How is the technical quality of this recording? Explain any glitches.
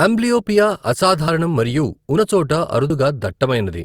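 The speech has three little skips, at 1.28, 2.18 and 2.90 seconds. Each is a jump forward, losing about 40 ms, about a tenth of a second, and about 40 ms. That's likely a dropped buffer (overrun), where chunks got overwritten before being read.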